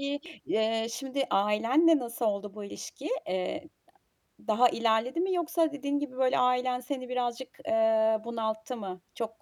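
At 0.26 s, just before "eee şimdi ailenle nasıl", the speech jumps forward with compressed frames skipped: about one frame of the encoded stream never reaches the output, so roughly a tenth of a second is lost, which fits a frame of about 93 ms. Unlike a dropout, no silent gap is left.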